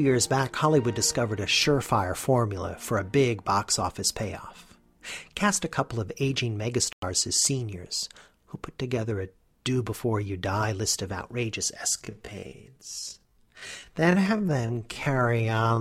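A digital broadcast dropout hits at 6.93 s and lasts until 7.03 s, a hole of about 96 ms. The receiver stopped getting usable data, either because the signal failed or because incoming frames failed their error check, so it muted its output rather than play corrupted audio. The gap's length fits roughly three lost frames. The sound cuts abruptly to silence and then resumes, and whatever was transmitted in that window is simply gone.

A time-stretched section begins at 11.93 s and runs to the end of the clip. From that point the pace drops abruptly to about 0.6 times its previous speed, while the pitch stays where it was. The likely cause is software lengthening this passage to fill a set duration, holding pitch steady by repeating short slices of the waveform.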